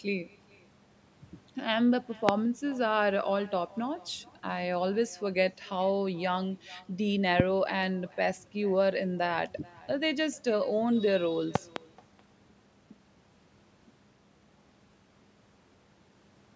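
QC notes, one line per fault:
Throughout, echo with no canceller. A quieter, thinner copy of the speech trails each phrase by roughly 0.4 s, about 25 dB down. The far end's loudspeaker feeds its microphone, and nothing removes that return path.
2.29–2.31 s, 7.40–7.42 s and 11.55–11.79 s, loud pop. Sharp pops stand roughly 20 to 25 dB above the speech, which carries on underneath. The last span holds two pops in quick succession. The likely cause is a voltage step from a plug, switch or static.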